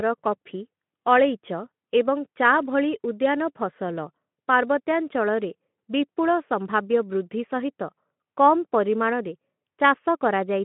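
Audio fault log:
No faults are present: the speech sits in a telephone-style band of about 150 Hz to 3.4 kHz, with nothing above 3.8 kHz, which fits Speex coding at around 15 kbps.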